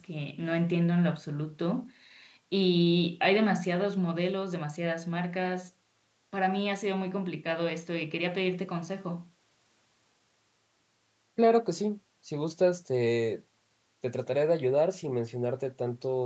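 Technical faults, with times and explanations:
No technical faults are present; the audio has passed through call microphone processing, with nothing above 8 kHz and the lowest bass taken out by its high-pass filter, which is normal.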